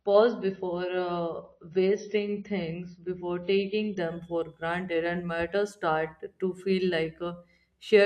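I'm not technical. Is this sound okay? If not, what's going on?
No. The first 4 seconds of speech sound dull. That's an adaptive stream starting at a low bitrate. It began in lower quality, then improved suddenly with no gap.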